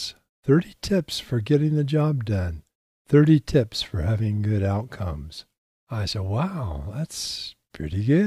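Nothing in this speech recording stands out as a technical fault, so there's really nothing to flag here.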